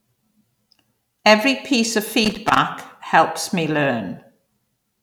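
Loose connector crackle runs from 2.24 to 2.58 s in this speech recording, between "piece of" and "helps me": an irregular burst of scratching where a worn or dirty contact kept making and breaking, chopping the signal for about a third of a second.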